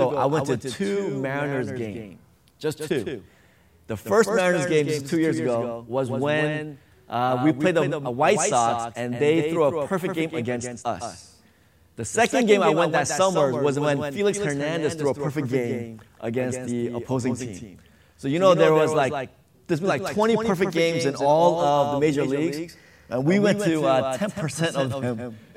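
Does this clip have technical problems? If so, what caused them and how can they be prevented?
Yes. A doubled audio track runs throughout: a second, full-band copy trails the original by roughly 150 ms at about 5 dB lower, dry and unsmeared, likely because the same signal is captured again through a slower monitoring or software path. Prevent it by routing each source only once and muting duplicate inputs or loopback returns.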